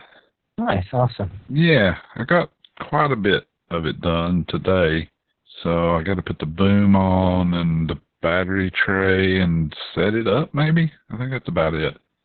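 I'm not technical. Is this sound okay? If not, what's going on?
No. Heavy Opus voice compression affects the speech from start to finish. The audio was squeezed hard to save data. Nothing above 4.5 kHz remains, so it sounds muffled, like an old phone line. The speech also comes out hoarse and slightly robotic.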